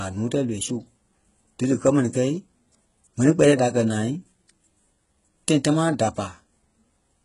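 HE-AAC compression throughout this speech clip: heavy damage, nothing above 11.1 kHz, and gritty treble likely rebuilt by spectral band replication, fitting roughly 12 kbps.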